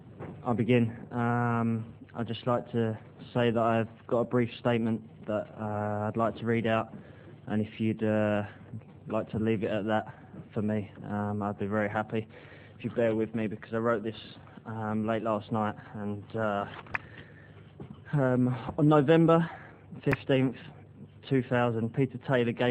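No technical faults can be heard anywhere in this audio. Nothing in the recording calls for correction or a cause to be traced.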